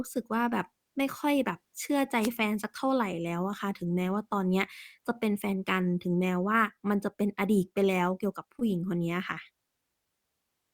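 At 2.21 s the speech is briefly hit by a wireless microphone noise hit, a burst of hiss lasting about 0.08 s, ending near 2.29 s. The radio link from an analogue FM microphone faded for an instant as reflected signals cancelled, so the receiver's own noise rose over the audio. It sounds like a quick swish of static, not a clean silent gap or a hard digital glitch, which sets it apart from a packet dropout.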